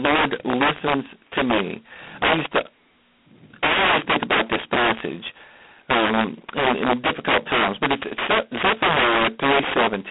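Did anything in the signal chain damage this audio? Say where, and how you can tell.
Yes. Integer overflow runs throughout, at the sample-format conversion stage. The level was pushed about 12 dB past full scale, and roughly 7 percent of samples wrap to the opposite sign instead of clipping. Every loud speech peak becomes a violent crack, far harsher than clipping.

G.726 ADPCM coding runs throughout, at the codec stage, at 16 kbit/s with heavy damage. The speech is confined to a 200 Hz to 3.4 kHz telephone band, with nothing above 3.8 kHz. So few bits per sample leaves a harsh, rasping hiss that rises and falls with the speech level.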